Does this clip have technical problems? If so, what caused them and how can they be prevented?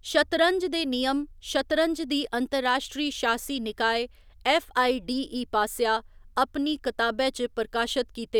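No, no technical faults audible.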